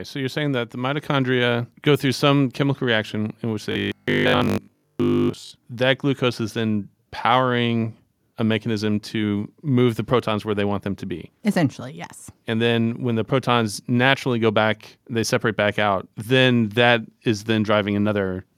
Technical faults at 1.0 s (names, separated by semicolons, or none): microphone volume stepped up